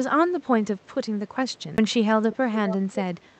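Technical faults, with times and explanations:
1.77 s, CD skip: there's a tiny tick and a dropout of roughly 10 ms, and then the audio carries on from a different spot than where it left off. That's what you get when the laser gets knocked or hits a flaw and lands on another turn of the disc's spiral. The player mutes briefly while it re-locks and then resumes wherever it ended up, so the continuity breaks right at the tick.
2.32–2.36 s and 2.54–2.77 s, echo leak: a delayed copy of the speech comes back about 0.55 s late. The first scrap is very short and sits about 20 dB under the main speech. The second runs for roughly a quarter second and is louder, only about 10 dB down. The likely cause is a far end playing the call on a loudspeaker, with its echo canceller missing part of what the mic picked up and sending that residue back down the line.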